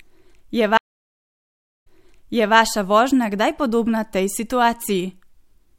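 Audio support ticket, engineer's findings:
Dropout 0.77 to 2.56 s: about 1.06 s of dead silence, then speech resumes roughly 0.73 s behind where it cut, repeating material. Stream reconnect in network/player layer. Connection dropped, client reconnected, server resent a burst from earlier, fresh decoder restarted mid-stream, hence the backward jump.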